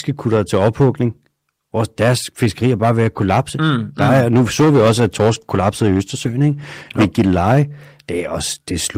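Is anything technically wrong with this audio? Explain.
Yes, two faults. Throughout, a gain stage is overdriven by about 11 dB, causing hard clipping: about 4 percent of samples are cut flat, adding harsh high harmonics that crackle on loud speech. From 4.37 to 7.65 s, a call bitrate drop forces the encoder from 32 to 17 kbps, bottoming out for about 2.5 s, so the speech turns coarse, watery or muffled.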